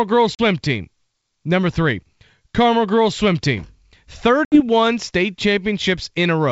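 At 0.35 s and again at 4.45–4.61 s, packet loss on an ADPCM call cuts holes of about 40 ms and 70 ms, each a few packets' worth. The waveform drops to hard-edged flat silence, and the spectrogram shows a full-band vertical gap. Resumption brings slightly distorted speech that settles within some tens of milliseconds, as the decoder's predictor and step size resynchronise.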